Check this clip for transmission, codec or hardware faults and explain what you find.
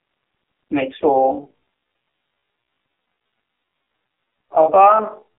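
Two faults are audible: a narrowband mobile codec throughout, and a slowed section from 1.08 s to the end.

AMR narrowband mobile codec, whole clip: the speech sounds heavily buzzy and synthetic, confined to roughly 300 Hz to 3.6 kHz with nothing above 4 kHz. The codec rebuilds the voice from a vocal-tract model and sparse pulses, and the damage fits a low bitrate around 6 kbps.

Time-stretched section, 1.08 s to the end: the pace drops abruptly to about 0.56 times normal speed while pitch holds, leaving the speech dragging. This is likely software stretching the audio by repeating short pieces to lengthen it without shifting pitch.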